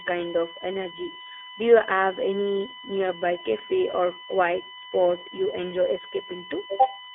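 A USB whine runs through the whole recording: a steady tone at 1 kHz with its strongest component at 3 kHz, sitting roughly 20 dB below the speech. The bus draws current in 1 ms frames, and that pulsing load leaks into the audio through the shared power or ground.

The iLBC codec also affects the entire clip. The speech is confined to a telephone band of about 300 Hz to 3.5 kHz, with nothing above 3.8 kHz. Its roughness and synthetic edge are plainly audible and fit independently coded 20 ms frames at the codec's 15.2 kbps mode.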